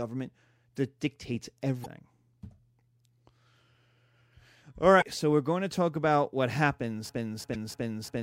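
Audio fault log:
1.82–1.86 s, 4.98–5.03 s and 7.51–7.56 s, damaged data in a compressed stream: each is a brief glitch lasting about 45 ms, the second just before "so we're going to" and the third just after "to talk about what". Corrupted bytes make the decoder misread frames, lose sync and hunt for the next header.
7.09 s to end, broken-record loop: a 0.35 s fragment repeats exactly, back to back, four times until the clip stops. A stall in the player or stream likely left it resending its last buffered piece, so the audio that belonged there never plays.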